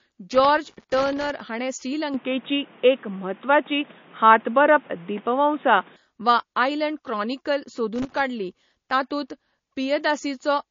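Throughout, the audio bears the marks of likely MP3 compression, which fits a low bitrate around 32 kbps. Starved of bits, the encoder has removed everything above 7.2 kHz and is dropping weak frequency lines from frame to frame, so the speech sounds dull, watery and swirly, with smeared consonant attacks.

From 0.33 to 1.30 s, and again from 7.96 to 8.28 s, there is loose connector crackle. A worn or dirty contact is making and breaking rapidly, chopping the signal, and this is heard as an irregular burst of scratchy crackle over the speech.

From 2.14 to 5.96 s the input was likely switched to a poorer device. There is no gap at the change. The band suddenly narrows to nothing above 3.8 kHz, so the speech turns boxy and muffled, the level shifts by roughly 5 dB, and a new background noise appears, well below the speech, before the original sound returns.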